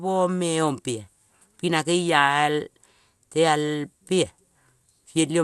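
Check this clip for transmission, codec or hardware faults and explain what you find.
One codec fault runs through the whole speech clip.

MP2 compression, throughout: the sound is dull, with nothing above 12.1 kHz and a plainly audible gurgling, granular roughness. The likely cause is MPEG Layer II coding starved of bits, dropping upper sub-bands and coarsely quantising the rest, consistent with roughly 80 kbps.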